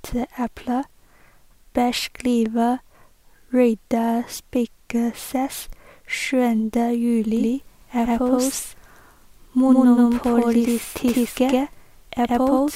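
A doubled audio track appears in this speech clip from 7.37 s to the end: a second, full-band copy trails the original by about a tenth of a second at roughly equal level, with no decay or room colour and an abrupt onset, likely from a slower second capture path.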